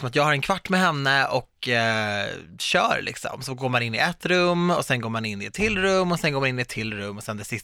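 No technical faults are audible.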